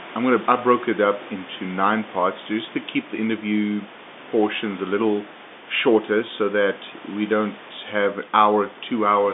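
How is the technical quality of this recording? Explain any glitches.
Nothing here really counts as a glitch; the recording comes across without any technical faults worth pointing out.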